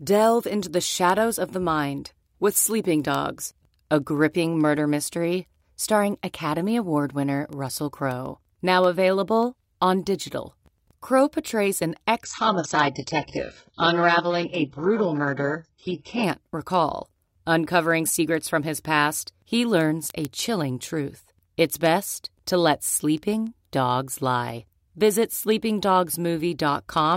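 From 0.22 s right through to 27.12 s, a train of word clock ticks runs under the speech: sharp, uneven clicks about every 0.15 s, roughly two hundred in all. The receiving device was free-running rather than locked to the digital source, and the mismatch, around 150 ppm, fits one sample being dropped or repeated at each slip. Unlike random dropouts or crackle, these ticks keep a strict metronomic spacing while their strength varies.

Between 12.24 s and 16.24 s the stream falls to a lower bitrate. Everything above 8 kHz vanishes and codec artefacts rise, which points to a drop from mid-rate AAC to a very low-rate HE-AAC version. What sets this apart from a network dropout is that the sound never stops. The quality changes abruptly at both edges of the 4-second stretch with no gap, and the ticks carry on through it.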